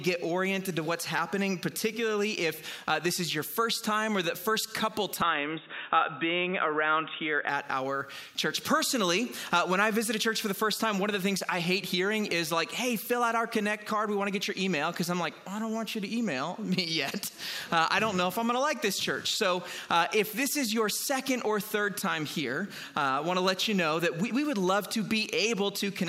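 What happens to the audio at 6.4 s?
From 5.22 to 7.49 s the sound turns dull and boxy, with a faint new background hiss, then clears again. This is likely the input switched to a poorer device. The changed noise floor sets it apart from a simple low-pass filter.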